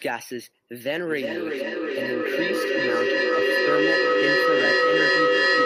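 From 0.81 s to the end, the speech carries feedback echo between two devices: a second device in the room replays the call, and this microphone picks it up again. Repeats return roughly every 0.4 s and build rather than decay, peaking about 7 dB above the speech.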